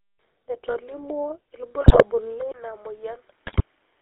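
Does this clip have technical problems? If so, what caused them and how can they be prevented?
Yes. The whole speech clip carries the GSM full-rate codec sound: a buzzy, gravelly roughness and no content above 4 kHz, which fits the 13 kbps full-rate coder. It rebuilds the voice from a vocal-tract model excited by regularly spaced pulses, so fine harmonic detail is replaced by that rasp. Unlike a plain low-pass, the roughness is in the voice itself, not just missing treble. To prevent it, carry the call over a wideband codec such as AMR-WB or Opus.

GSM bit errors break the sound into squawks, pops and gargling at 1.82 to 2.04 s and again at 3.46 to 3.63 s. These bursts come from corrupted filter, pitch and gain values reaching the decoder on a weak radio link, so a frame's spectrum bends or its level jumps. Dropped packets leave gaps or smeared repeats. These errors instead produce harsh, wrong-sounding noise for a few frames at a time. 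To prevent them, keep the handset within good signal coverage so the channel coding can correct the errors.

At 2.52 s there is a 20 ms silence. After it the sound turns duller and boxier, with nothing above 3.8 kHz, a level drop of about 5 dB and a new noise floor roughly 30 dB below the signal. This is likely the input switched to a poorer device, such as a headset's call profile. The codec's band limit runs through the whole clip. This change instead arrives suddenly and brings its own level and noise. To prevent it, lock the input device before recording starts.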